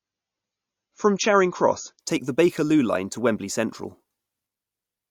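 For the first 2.0 s, until "take the", an adaptive stream starting at a low bitrate leaves the speech dull and smeary, with nothing above 7 kHz, until it snaps cleanly to full quality.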